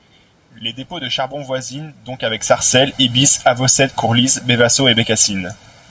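From the start, channel delay (comb filtering) makes the speech hollow and phasey. One channel lags by roughly 1.5 ms before the mono sum, cutting fixed notches from around 400 Hz upward. The notches stay put rather than sweeping like a flanger. From 2.36 s, right after "de charbon voisines donc", automatic gain falling lowers the level by about 7 dB until 5.65 s. The background sinks along with the voice, which separates it from the talker shifting position near 2 s.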